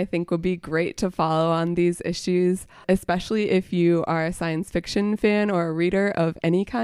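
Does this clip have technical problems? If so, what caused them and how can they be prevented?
No, nothing stood out as a technical problem on listening to this speech recording.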